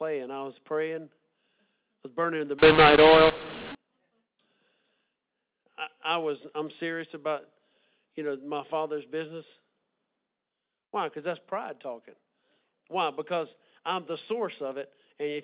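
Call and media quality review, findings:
Harsh, gritty distortion from 2.59 to 3.75 s, right after "was burning the"; gaps fill with hiss. Probable decoder fault: mu-law and A-law mixed up, mu-law G.711 read as A-law, scrambling sample levels and lifting near-silent samples.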